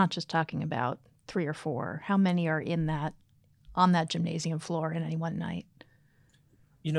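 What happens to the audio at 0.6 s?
Nothing goes wrong at 0.6 s; the speech there plays through intact, with no dropout, click or distortion.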